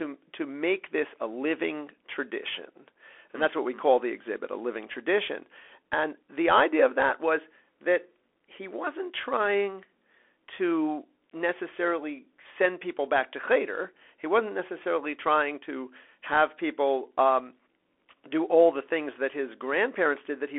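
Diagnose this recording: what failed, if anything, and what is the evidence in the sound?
The speech sounds boxed-in and telephone-thin for the whole clip, with scratchy, distorted sibilants, a grainy hiss under the voice, and no content above about 3.8 kHz. The stage is the codec: a Bluetooth CVSD headset codec, consistent with a 64 kbit/s one-bit delta stream. Each sample only steps up or down, and the adaptive step can't keep pace with loud high-frequency energy. Combined with the roughly 300 Hz to 3.4 kHz line band, this causes the clear damage heard throughout.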